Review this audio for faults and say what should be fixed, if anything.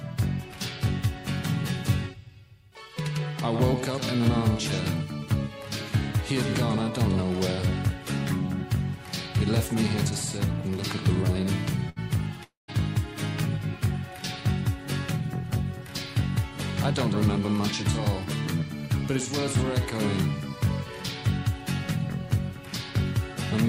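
Burst of packet loss at 11.89 to 11.99 s: the receiver stretches the last sound for 66 ms, fading it, then skips 60 ms. On a spectrogram this shows as smeared, frozen bands ending in an abrupt jump.

Long network dropout at 12.44 to 12.71 s: the sound decays over 239 ms, leaving 150 ms of near-silence as a flat stretch on the waveform, and 240 ms never returns. The likely cause is the connection stalling.

Forward error correction, packet redundancy and a deeper jitter buffer would prevent these losses.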